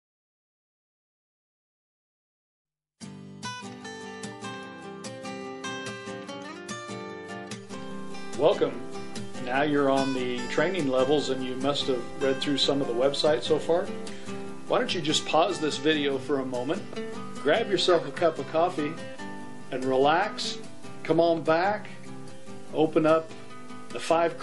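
Throughout the clip a watery, swirling quality points to heavy MP3 compression as the likely cause, fitting a low bitrate around 48 kbps. On a spectrogram the upper bands show sparse, flickering patches.

From 2.98 to 3.01 s a pre-echo appears: about 30 ms of hiss, roughly 17 dB above the surrounding floor, just before a sharp attack, which sounds softened. The spectrogram shows a smear ahead of the onset, consistent with a long transform window that never switched to short blocks.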